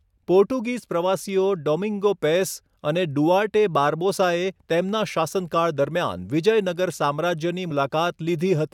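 At 7.70 s there is a single glitch from damaged data in a compressed stream. It is very brief, under 20 ms. A short stretch of the encoded data was wrong at that point. The decoder could not read those bytes as a valid frame. It lost its place and had to find the next frame header before normal decoding resumed. The result is a quick glitch in the speech.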